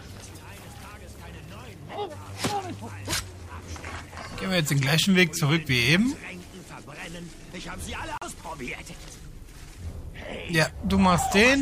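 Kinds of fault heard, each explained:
Bluetooth stall: sound drops out for 40 ms near 8.2 s, likely packets delayed until the headphone buffer emptied; flat waveform, blank vertical spectrogram strip.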